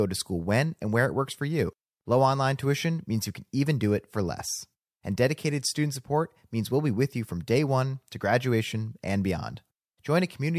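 No faults can be heard anywhere in the speech.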